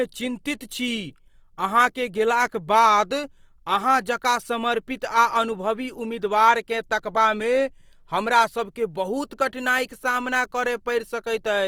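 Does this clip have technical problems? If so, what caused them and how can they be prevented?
Yes. Throughout the speech, the audio sounds rough and grainy, with a noisy, sandy texture over the voiced parts. The full bandwidth remains, with content reaching about 20.3 kHz, so the effect is coarse grain rather than muffling. This is likely Opus compression in its music (CELT) mode, at a rate that fits roughly 24 kbps. Starved of bits, the encoder fills bands with folded or noise-like material, producing this graininess. To prevent it, encode speech at a higher Opus bitrate or let the encoder use its speech mode.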